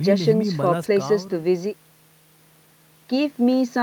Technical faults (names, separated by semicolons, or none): none